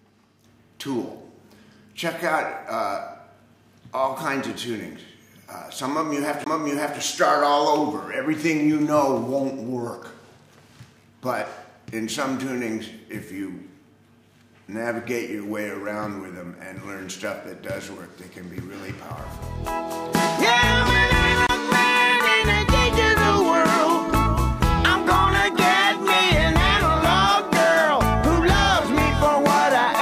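The audio has two CD skips, at 6.44 to 6.46 s and again at 21.47 to 21.49 s. Each is a short tick, then a brief mute of roughly 20 ms and then about 30 ms. The sound then carries on from a different point. The laser was knocked or hit a flaw and jumped to another turn of the disc's spiral. Playback resumed out of place, so the continuity breaks abruptly.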